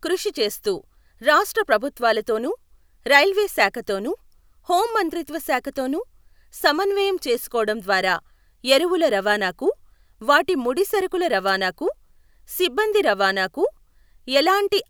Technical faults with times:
11.47-11.51 wireless microphone noise hit

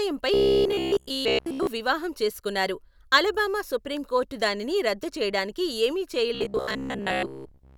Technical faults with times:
0.34-1.67 robotic sound from repeated short buffers
6.35-7.77 robotic sound from repeated short buffers

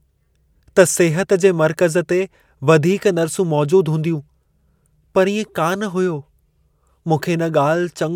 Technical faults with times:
none

